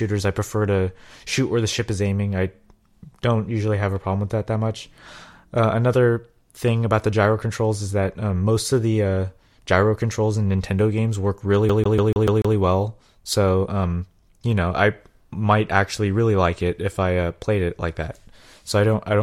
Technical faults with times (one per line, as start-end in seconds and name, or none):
11.69-12.56 CD stuck on one turn